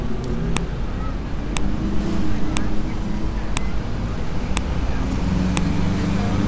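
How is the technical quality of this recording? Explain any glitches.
The recording is marred by a regular series of clicks. A file header is being played as audio, at 0.57, 1.57, 2.57, 3.57, 4.57 and 5.57 s. The audio arrives in one-second pieces whose header bytes were never stripped, so those bytes play as samples. Each one is a brief, sharp snap, independent of the surrounding sound.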